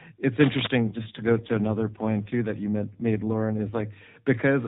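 From 0.82 s to 3.85 s there is an AMR rate drop. The speech turns rougher and more synthetic, which fits the codec falling from about 12.2 kbps to 4.75 kbps on a weak link. The narrowband stays the same, with no gap. Quality returns afterwards.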